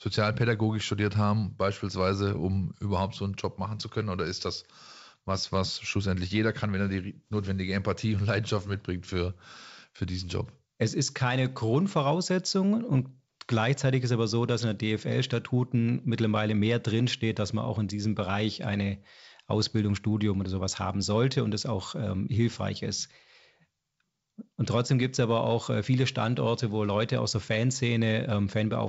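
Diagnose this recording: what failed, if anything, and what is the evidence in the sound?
Nothing here has failed: the speech comes across as ordinary G.722 wideband telephone audio at 64 kbit/s, with the band reaching up to about 7 kHz and only the faint upper-band hiss that this coding leaves.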